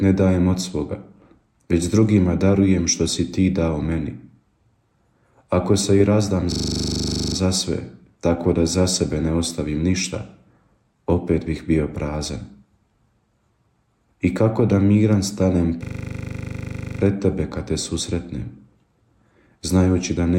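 A system hang loop hits twice, from 6.52 to 7.36 s and from 15.84 to 17.0 s: the machine stalled while the sound hardware kept replaying one 40 ms stretch of its ring buffer, producing a buzzy 25 Hz machine-gun stutter before the audio resumes with essentially nothing skipped.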